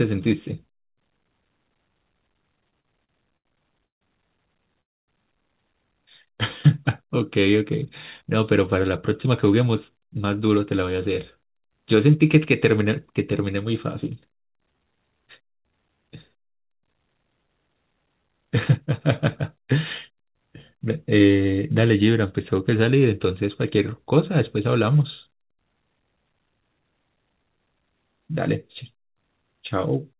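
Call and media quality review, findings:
Repeated stalls (stutter), 2.56–4.04 s: seven short hold-ups, longest 160 ms, filling about a quarter of the span. Jitter buffer repeatedly running dry, receiver extending the last sound each time. Nothing lost. Recurring brief catches, unlike a single freeze.

Call audio freeze, 4.81–5.11 s: one gap of about 0.27 s, almost all of it silent, then playback resumes where it stopped. Likely cause is a jitter buffer underrun from delayed packets. One long silence, not a train of catches.

Jitter buffer speed-up, 8.22–10.83 s (108%, roughly 0.2 s removed), 18.08–21.46 s (106%, roughly 0.2 s removed), 23.25–24.13 s (106%, under 0.1 s removed): hurried delivery at unchanged pitch as the receiver trims pitch periods to drain excess buffer. Pitch holds, so not resampling.

Jitter buffer slow-down, 14.48–16.30 s: runs at 92%, about 159 ms added, with drawn-out sounds at the same pitch. 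Receiver repeating pitch periods to rebuild reserve. Stretched but continuous, unlike a freeze. Band limit at 4 kHz fits a G.711 call path at 64 kbps.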